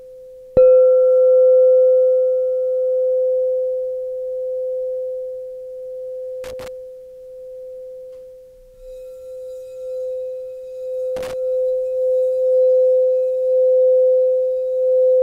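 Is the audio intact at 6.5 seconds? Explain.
No. From 6.44 to 6.68 s, a worn or dirty contact in the signal path shifts and repeatedly makes and breaks, producing loose connector crackle. Each break briefly cuts the signal, and each reconnection snaps any standing DC offset back onto the line, so the sound is chopped into fragments. For roughly a quarter of a second the audio is heard as an irregular, scratchy burst of crackle.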